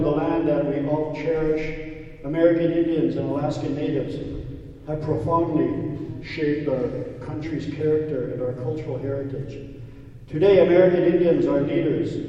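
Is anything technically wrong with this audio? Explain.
Yes. From 6.08 to 7.44 s a drift correction step slows the audio by 5.24% and drops pitch 93 cents, nearly a semitone, then snaps back, likely clock-matching software resampling to refill its buffer. Spectrogram harmonics step down, then jump back up.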